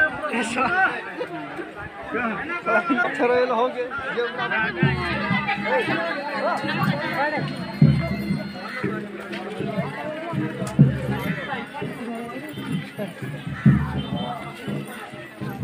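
At 3.02 to 3.05 s, damaged data in the compressed stream makes the decoder misread frames and lose sync. A brief blip results.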